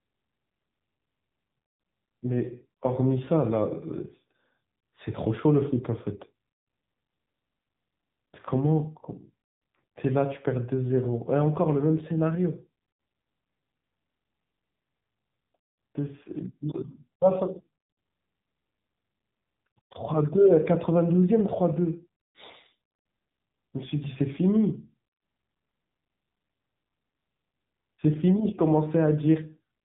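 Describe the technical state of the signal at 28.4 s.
At 28.4 s the speech still runs through the AMR narrowband mobile codec present across the whole clip, at a rate that fits its 7.4 kbps mode. Nothing above 4 kHz survives, and the sparse pulse excitation leaves the voice plainly buzzy and synthetic.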